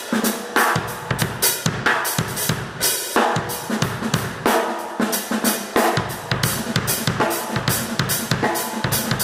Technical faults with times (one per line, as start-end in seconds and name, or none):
2.80-2.85 frames out of order
4.85-4.92 frames out of order